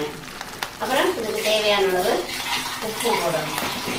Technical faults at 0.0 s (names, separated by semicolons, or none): none